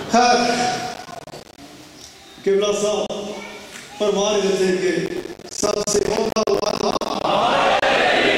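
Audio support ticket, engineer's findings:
Processor overload crackle, 0.94 to 1.58 s: gritty tearing over the sound. Audio callback missing deadlines back to back. Each late buffer drops out to silence with hard edges. Spacing fits buffers of around 10 ms, a few dozen missed.

Processor overload crackle, 5.06 to 7.24 s: same symptom, longer. Sustained CPU load. Something on the order of a hundred short buffers dropped to silence. Crackle clears once the load passes.

Gap at a join of encoded pieces, 3.07 to 3.10 s: hole of about 31 ms in continuous sound. Edges smeared by the codec. Separately encoded segments concatenated without trimming, so encoder delay and last-frame padding remain. Sound resumes where it stopped.

Gap at a join of encoded pieces, 7.79 to 7.82 s: second dropout, about 30 ms. Same untrimmed segment join, with leading delay and trailing pad silence kept at the splice. 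Check the concatenation step for gapless trimming.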